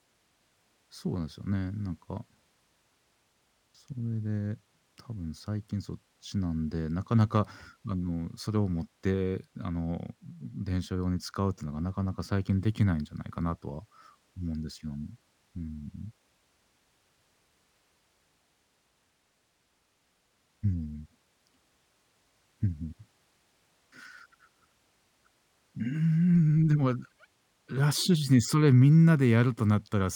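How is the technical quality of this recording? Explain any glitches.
The recording has one fault that runs throughout: imaging from linear upsampling. Straight-line interpolation fits a 24 kHz original raised to 48 kHz. That dulls the top of the band and leaves a faint mirror image between 12 and 24 kHz, roughly 35 dB down, heard as a light metallic shimmer on sibilants. Unlike aliasing, the image mirrors existing content upward instead of folding foreign tones down.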